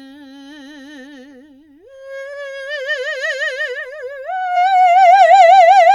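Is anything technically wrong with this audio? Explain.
Yes. The music has compressed frames skipped at 2.32 s and 4.55 s. At each point whole coded frames never reached the output, either missing from the file or rejected by the decoder as damaged, so playback jumps ahead. The jump is about 50 ms at the first point and about 70 ms at the second, which fits two and three frames of 23.2 ms. Because adjacent frames overlap, each join is a brief smeared blip rather than a hard click.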